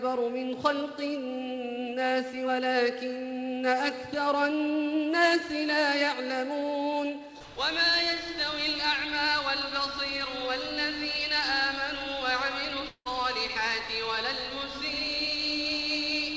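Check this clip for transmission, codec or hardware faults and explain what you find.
One fault stands out, at 12.88 to 13.07 s. The sound there turns into a fading buzz that stretches the last moment of audio for about 174 ms, drops into roughly 70 ms of silence, then picks up again with about 180 ms simply gone. This is likely a long network dropout: packets stopped arriving, so the receiver's concealment extended what it last had until it gave up. The G.722 call path's 8 kHz ceiling carries through the resumed audio.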